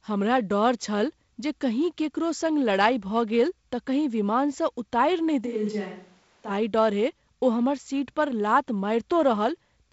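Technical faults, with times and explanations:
5.48 to 6.49 s, switch to a distant microphone: The speech suddenly turns roomy and hollow, with thinner bass and a level drop of about 5 dB. Faint room noise appears beneath it. The close microphone likely dropped out, leaving a farther one. The close sound returns abruptly.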